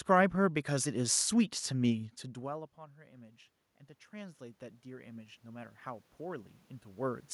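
Automatic gain rising runs from 1.96 s to 7.29 s. After the talker moves away from the microphone around 2 s, the input drops by about 23 dB, and the gain control slowly pushes its level up by about 13 dB, so the voice and the room noise swell together.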